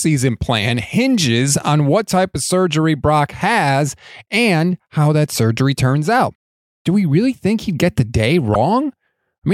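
At 8.54 s, just after "he'd get the day", a corrupt frame was decoded: a short burst of flipped bits reached the decoder, which played the damaged data as if it were valid. Misread gains and codes put energy at the wrong frequencies for roughly a couple of frames. It sounds like a brief glitch of misplaced energy. A plain click or a dropout to silence would be broadband or empty, not misplaced in frequency like this.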